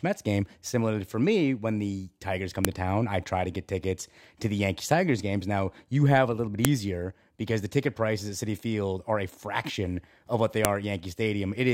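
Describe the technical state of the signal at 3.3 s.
At 3.3 s the speech signal is intact, with no audible technical fault at that moment.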